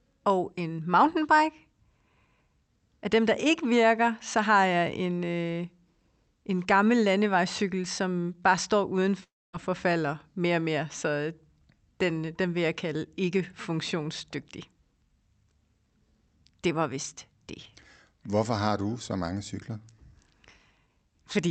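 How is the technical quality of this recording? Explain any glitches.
The recording has one clear glitch, a gap of roughly a third of a second in the middle of the speech, over a call path whose Opus-style coding limits the top end to about 8 kHz.

From 9.23 s to 9.55 s, just after "landevejscykel som bare står", the audio breaks off. The last sound is stretched into a decaying buzz or hiss, then settles into near-silence for about a quarter of a second before speech resumes at "forfalder mere og mere". About 300 ms of the original audio never returns. This is likely a long network dropout: packets stopped arriving, the receiver's concealment extrapolated the final sound until it faded, and playback restarted later without the missing segment.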